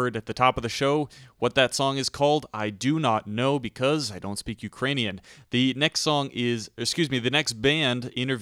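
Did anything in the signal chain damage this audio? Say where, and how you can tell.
No, nothing in the signal chain damaged this audio, so there is no stage to point to.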